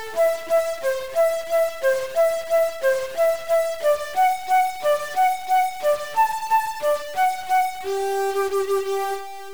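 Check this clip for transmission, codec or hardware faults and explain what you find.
One hardware-type fault is present throughout. Stuck bit, likely from a broken data line or converter: one bit is pinned, shifting values by about -35 dBFS. It sounds like harsh buzz with noise-filled pauses, showing as stepped waveform offsets and broadband spectrogram haze.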